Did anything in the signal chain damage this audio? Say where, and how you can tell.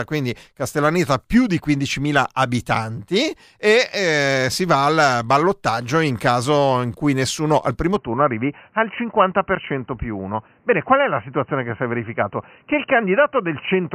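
Yes. From 7.96 s to the end, the speech goes dull and boxy, with nothing above 3 kHz, and a new faint noise floor appears, roughly 40 dB down. The likely cause is the input switched to a poorer device at the driver stage. A codec bandwidth drop wouldn't bring its own background noise.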